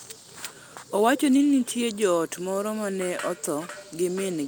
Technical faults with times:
none

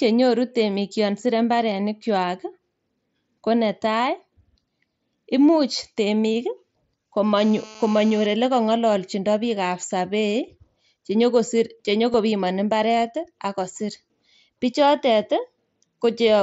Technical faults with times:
7.38-8.26 GSM phone buzz
12.13 concealed Bluetooth headset packet loss
13.88 concealed Bluetooth headset packet loss

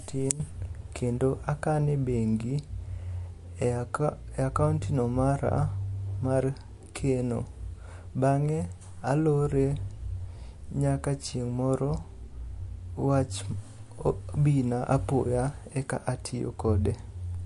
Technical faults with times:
0.00-17.45 MP3 compression

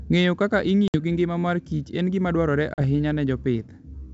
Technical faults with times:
0.88-0.96 packet loss on an ADPCM call
2.74-2.81 packet loss on an ADPCM call

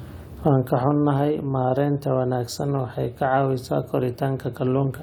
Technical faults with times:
none

